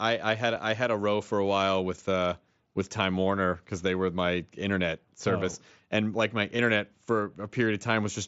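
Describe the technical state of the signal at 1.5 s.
At 1.5 s the speech is intact, passing through the wideband Bluetooth mSBC headset path with no fault at that moment.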